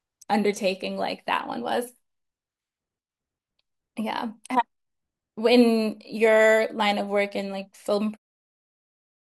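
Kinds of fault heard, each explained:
No faults are heard in this speech clip.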